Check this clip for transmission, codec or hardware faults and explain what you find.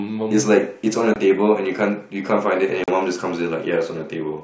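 Two short dropouts from packet loss on an ADPCM call break the speech, at 1.14–1.16 s and 2.84–2.92 s. The first gap is about 20 ms, which fits a single lost packet. The second runs about 40 ms, enough for a couple of packets. Each lost stretch is filled with silence, so the audio stops dead with a hard edge. The receiving ADPCM decoder then no longer tracks the sender's predictor and step size. When sound resumes it comes back slightly distorted, and settles over a few tens of milliseconds as the decoder adapts again. On a waveform each event is a flat gap with abrupt walls, followed by a short misshapen burst. On a spectrogram it is a blank vertical band across all frequencies. The underlying G.722 wideband coding carries speech clearly up to 7 kHz, which fits its full-rate mode.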